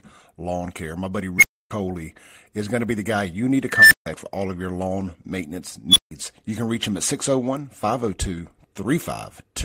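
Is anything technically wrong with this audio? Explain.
Yes, the speech has three bursts from an unstable filter, a recursive filter whose feedback runs away. A tone swells until it clips, then the output overflows and drops out until the filter resets.

At 1.38–1.71 s, a squeal around 2 kHz builds in about 41 ms, followed by roughly 283 ms of silence. At 3.70–4.06 s, between "guy you need to" and "for all of your", a tone around 2 kHz swells over about 209 ms, followed by 152 ms of silence. At 5.89–6.11 s, after "of your lawn maintenance", a squeal around 3 kHz builds in about 68 ms, followed by roughly 155 ms of silence.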